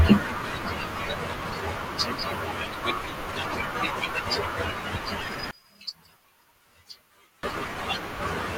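From 5.51 to 7.43 s the speech drops by about 23 dB to a faint residue, likely one channel inverted, so the centred signal cancels when both channels are summed to mono. The waveform collapses abruptly, and the spectrogram goes nearly empty.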